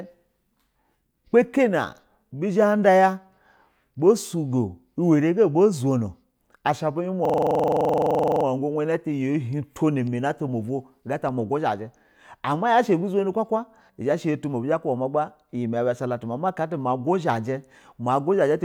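From 7.25 s to 8.45 s the speech locks into a system hang loop: the playback side stalled while the sound hardware kept replaying the same ring buffer. A 42.7 ms slice, which fits a 2048-sample buffer, repeats about 28 times at 23.4 Hz, giving a rapid machine-gun stutter. The waveform shows identical blocks tiled end to end, and the spectrogram shows a frozen frame repeating with vertical seams every 42.7 ms. Speech then resumes with essentially nothing skipped.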